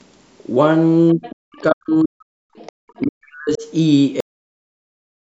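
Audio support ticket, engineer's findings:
Echo canceller likely leaving residual far-end signal in the mic path: other side's voice leaking through at 1.09–1.35, 1.52–1.61, 2.66–2.72 and 2.89–3.06 s. Faint second voice under the talker, about 20 to 30 dB down, in short scraps.

Double-talk handling likely ducking the near-end talker along with the echo: speech suppressed in double talk at 1.15–1.25 s (about 15 dB dip, roughly 100 ms), then 1.61–2.61 s and 2.99–3.65 s (up to about 40 dB). Talker's voice sinks or drops out in pieces.

Final buffers never written or played out: cut-off end at 4.20 s. Audio stops mid-sound and falls straight to digital silence, no natural decay, and stays silent to the end of the clip.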